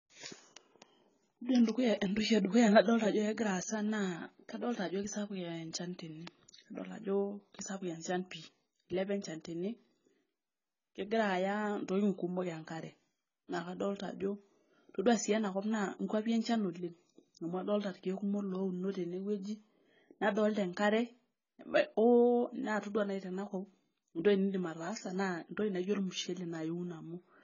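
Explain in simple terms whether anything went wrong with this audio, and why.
Throughout the speech, everything above 7 kHz is missing and the rest sounds dull and smeared, likely from heavy AAC compression discarding detail to save space.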